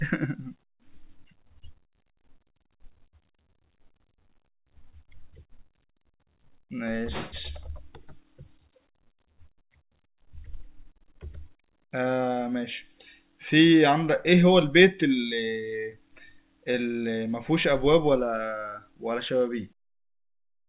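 Nothing stood out as a fault on listening to this speech: the level fades out smoothly from around 19.5 s to 19.74 s, and the sound has the narrow, telephone-like band of a G.711 A-law call path at 64 kbps, with nothing above 4 kHz.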